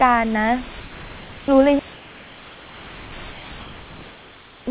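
From 3.32 to 3.50 s, the room background, about 22 dB below the speech, gives way to comfort noise in place of the background: 180 ms of steady, featureless hiss, about 1 dB quieter, likely synthesised at the receiver while the sender paused transmission during silence.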